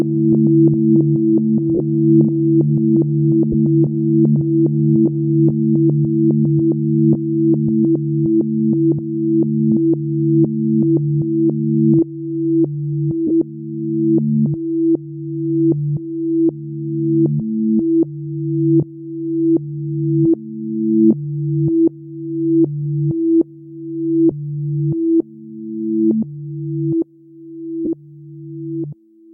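Lost LE Audio frames at 1.75 s (45 ms), 3.52 s, 13.27 s (30 ms), 24.31 s and 27.85 s: the decoder repeats the last spectrum with random signs, smearing the sound into brief noisy blurs.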